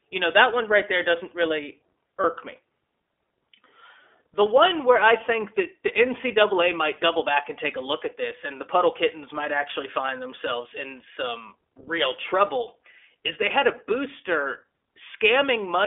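The whole speech clip runs through the iLBC codec. Nothing passes outside roughly 300 Hz to 3.5 kHz, so it sounds thin and boxed in. Each 20 ms frame is coded on its own. The damage is plainly audible as a rough, slightly synthetic edge. The character fits the 15.2 kbps mode.

From 2.22 to 2.26 s there are lost iLBC frames. The dropout is short and fits a single missing 20 ms frame. The decoder fills the hole by repeating the last pitch cycle with added noise. It sounds like a brief, buzzy held vowel. The voice is right again almost immediately.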